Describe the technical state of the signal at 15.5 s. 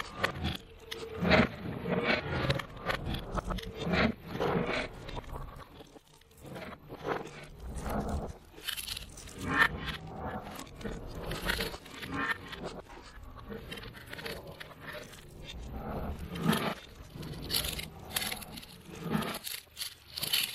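At 15.5 s the signal is intact, with no audible fault.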